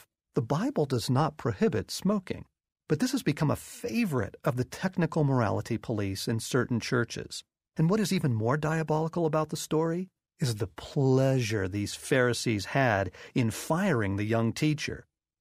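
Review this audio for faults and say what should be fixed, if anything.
No faults found; nothing needs fixing.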